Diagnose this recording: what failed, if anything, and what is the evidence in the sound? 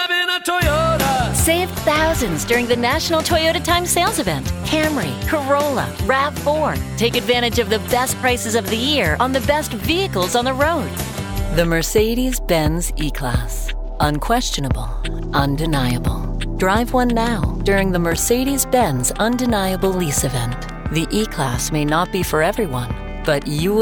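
Nothing failed in this recording, and the sound gives no evidence of any fault.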